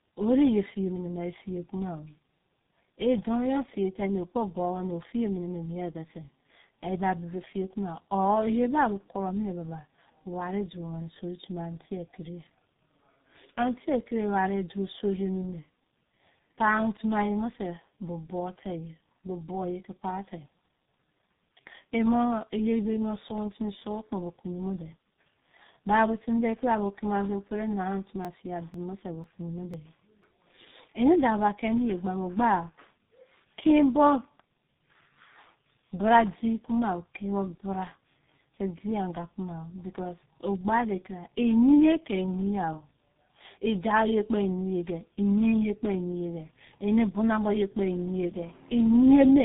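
From the first second to the end, the speech carries tandem speech coding. Two low-rate speech codecs sit back to back, and the second one has to squeeze audio the first already mangled. The roughness, warble and dull, boxy tone fit a GSM full-rate leg followed by a G.723.1 leg, with a plain G.711-style telephone hop between them. Nothing comes through above 3.8 kHz, so sibilants lose their edge and everything sounds narrowband and smeared.

Between 28.25 and 30.24 s there's a short run of periodic USB or driver dropouts on top of that. Something keeps stalling the audio path every 0.5 s, and each time roughly 2 ms of sound is skipped outright rather than padded with silence. The result is about five small, evenly spaced ticks, like a metronome clicking through the speech. They're only audible while someone is actually talking, since a skip in near-silence leaves nothing to jump.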